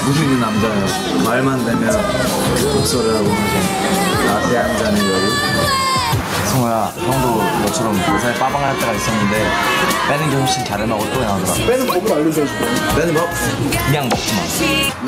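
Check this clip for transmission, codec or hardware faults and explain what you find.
One fault runs through the whole clip: gain pumping. The gain swings by about 10 dB. The likely cause is input gain set far too high, with a fast limiter clamping it. Levels sound squashed and flattened.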